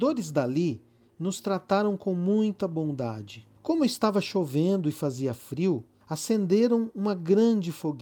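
No technical faults can be heard in this recording.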